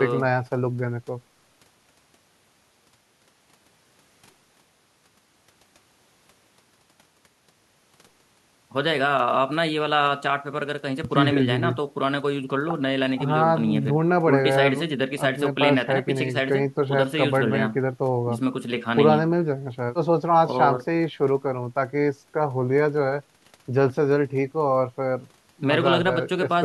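No technical faults are audible anywhere in the recording.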